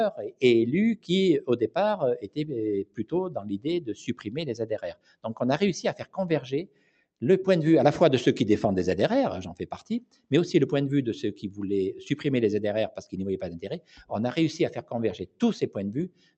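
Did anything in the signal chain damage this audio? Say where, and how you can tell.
Yes. The damage is in call processing: a noise suppressor built for speech was applied to music or other non-speech sounds across the whole clip. Its gain keeps swinging by around 10 dB as it tracks steady and decaying material, so the sound pumps and thins, while sharp onsets pass almost untouched. That onset-versus-sustain pattern separates it from an automatic gain control, which would ride the overall level and not single out tails.

The sound cut by the noise suppressor becomes audible in five stretches: 0.96 to 5.25 s, 5.98 to 7.22 s, 9.62 to 10.31 s, 13.79 to 14.06 s, and 14.76 s to the end. In these stretches, held and fading parts dip by up to about 17 dB (about 16 dB at 13.79 s), for a total of a few seconds. Decays are clipped early instead of fading naturally. A network dropout would silence everything abruptly, attacks included. 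The Opus path itself shows its usual coding noise and its 8 kHz bandwidth ceiling.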